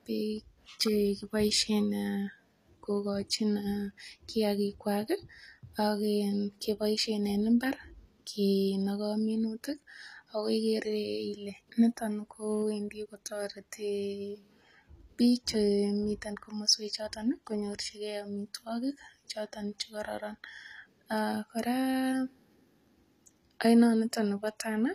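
From start to finish the speech carries the signature of low-bitrate audio saved at a high bitrate. A spectrogram shows a flat ceiling with nothing above 14.9 kHz, and the upper band looks patchy and smeared. The cause is likely a first pass through a very low-rate codec, which fits HE-AAC near 24 kbit/s. It was then re-encoded as MP3 at a rate around 192 kbit/s, which keeps those losses intact.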